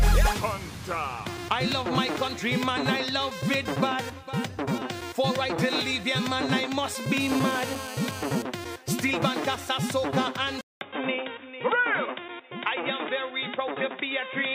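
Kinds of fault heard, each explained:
GSM phone buzz: a nearby 2G phone's radio bursts, rectified by the audio circuit, add a steady, raspy 217 Hz buzz about 13 dB below the sound from 7.2 to 8.4 s.
Input switched to a poorer device: the input likely changed to a narrower-band device at 10.61 s, leaving a 200 ms gap, then duller, slightly quieter sound with nothing above 3.8 kHz.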